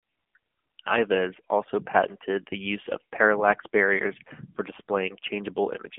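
AMR narrowband mobile codec runs throughout the speech, with nothing above 3.6 kHz and a phone-line band of roughly 150 Hz to 3.4 kHz. The vocal-tract model, fed by sparse pulses per frame, leaves plainly audible buzzy, synthetic damage, consistent with a 7.4 kbps mode.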